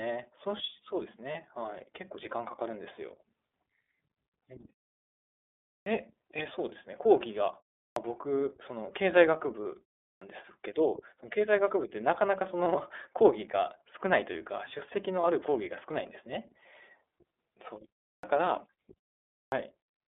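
The clip is speech carried through the iLBC codec. The band runs only from about 250 Hz to 3.6 kHz, so everything above is gone and the low end is thin. The codec damage is plainly audible. The voice sounds rough and slightly synthetic, as each frame's excitation is coded on its own. The texture fits iLBC's 13.33 kbps mode with 30 ms frames.

Lost iLBC frames occur twice, at 1.32 to 1.36 s and at 15.21 to 15.24 s. Each gap is about 30 ms, which points to a single lost packet. The decoder filled it by repeating the last pitch cycle with some noise. So each gap is a brief buzzy, held sound. Because iLBC frames stand alone, the voice recovers at once.

There is also a clipped start after a pause. It happens at 5.80, 7.90, 10.15, 18.16 and 19.45 s. Each time, the first 62 to 73 ms of sound is swallowed. The pauses before these points last from 0.31 to 1.14 s. Speech then starts abruptly, missing its opening sounds. 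The output device likely sleeps in silence and needs time to wake.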